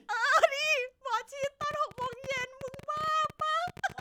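From 1.44 s to the end at 4.0 s, a train of clicks runs over the speech: around forty near-identical pops at an uneven pace averaging 13.7 per second, standing out roughly 5 dB above the signal and ticking through pauses too. Likely cause is external interference or a struggling interface.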